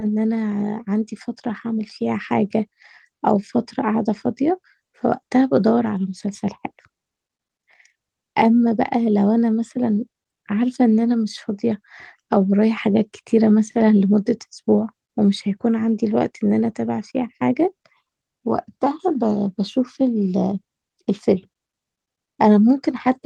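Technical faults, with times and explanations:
No technical faults can be heard in this speech.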